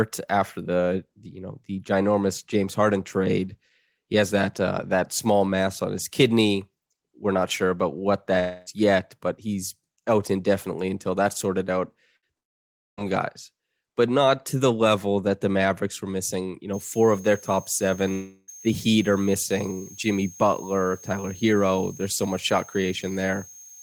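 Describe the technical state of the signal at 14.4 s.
The speech signal at 14.4 s is intact, with no audible technical fault at that point.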